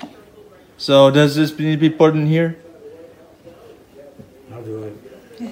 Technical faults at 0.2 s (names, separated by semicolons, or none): none